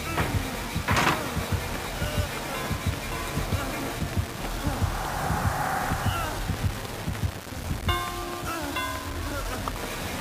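Low bit depth without dither runs through the whole clip: a coarse, grainy distortion tracks the sound, sitting only about 10 dB below it, and quiet passages turn gritty or sputter. The likely cause is rounding to very few levels, which fits 4-bit quantisation.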